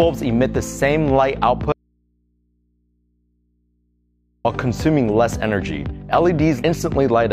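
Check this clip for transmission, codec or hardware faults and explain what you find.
One fault is present: an audio dropout to a faint residue from 1.72 s to 4.45 s, lasting about 2.7 s. The signal stops abruptly and returns just as suddenly, and the gap is not silent. It holds a low mains hum roughly 45 dB below the normal level. The likely cause is a break in the signal feed while the downstream input stayed live and picked up hum. A true dropout to digital silence would leave no hum, and a pause or fade would not switch off this sharply.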